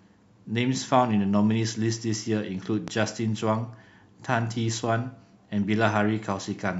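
At 2.88 to 2.90 s a single loud pop, roughly 10 dB above the speech, likely from a voltage pulse. Unlike a dropout, the speech continues underneath it.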